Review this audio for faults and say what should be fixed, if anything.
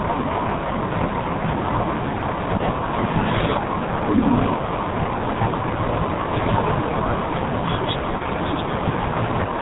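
The whole clip carries the signature of the G.723.1 codec, with heavy codec damage. Nothing above 4 kHz survives, so the speech is muffled, and the slow-updating voice model over 30 ms frames leaves it hoarse with smeared consonants, consistent with the 6.3 kbit/s mode. Preventing it means carrying the call on a wideband or higher-rate codec such as G.722 or Opus rather than G.723.1.

VoIP packet loss concealed by the speech codec appears twice, from 2.57 to 2.62 s and from 8.18 to 8.22 s. Each gap is short enough to fit a single lost 30 ms frame. The decoder fills it by extending its last pitch and filter state at decreasing gain, which produces a brief fading smear of buzzy tone or coloured noise, and the following speech stays weak or distorted while the predictive state recovers. Preventing it calls for a cleaner network path with QoS prioritisation, plus forward error correction or redundancy to cover isolated losses.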